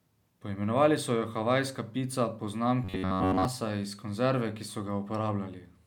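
From 2.84 to 3.45 s, robotic sound from repeated short buffers turns the speech into a metallic buzz at 93.8 Hz. Audio likely arrived too slowly, so a snippet of about 10.7 ms was replayed while most of the real signal was skipped. A spectrogram would show evenly spaced harmonics at multiples of 93.8 Hz, and the waveform would show one short shape cycling repeatedly.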